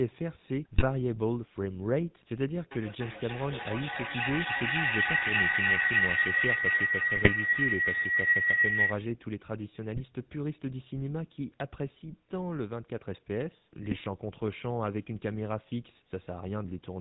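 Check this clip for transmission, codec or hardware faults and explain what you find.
Three faults are present: GSM full-rate coding throughout, four bursts of GSM bit errors, and a sustained feedback howl.

The GSM full-rate codec damage runs through the whole clip. The codec rebuilds speech from a vocal-tract filter excited by sparse, regularly spaced pulses, which fits a 13 kbps full-rate link. That produces a plainly buzzy, gravelly roughness. On a spectrogram, energy stops sharply at 4 kHz, and the harmonics look coarse and smeared.

GSM bit errors hit at 0.74–0.85 s, 7.16–7.31 s, 9.95–10.01 s and 13.90–13.97 s. Corrupted filter, pitch or gain parameters reached the decoder, so those frames come out as squawks, pops and gargling. The waveform shows sudden amplitude spikes, and the spectrogram shows short blocks of misplaced energy.

A feedback howl builds from 2.71 to 9.11 s. Two devices in the same room closed an acoustic loop that gained level on each pass, with each trip around the loop taking roughly 300 ms. 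The result is a tone near 2 kHz peaking about 9 dB above the speech. On a spectrogram it appears as a bright horizontal line.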